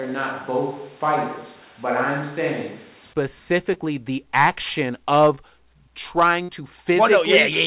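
From the start until 3.13 s the sound is roomy and hollow, with thinner bass, a level roughly 5 dB lower and a raised noise floor, most likely a switch to a distant microphone. On a spectrogram the low end is weaker and reverberant smearing fills the gaps, and at 3.13 s the waveform steps abruptly up to the close sound.

Two short concealed packet losses follow, at 3.74 to 3.78 s, just before "the action", and at 5.36 to 5.39 s, just after "the action". In each, about 20 ms of audio never arrived and the decoder filled the gap by extending the preceding sound. Each is heard as a brief smear or wobble.

At 6.43 to 6.50 s a burst of packet loss removes about 60 ms. The receiver stretched the last sound and faded it out before the audio resumes further along. On the waveform this shows as a decaying stretch followed by a jump in the signal. The spectrum stays empty above 4 kHz throughout, which fits a narrowband telephone codec on the call path.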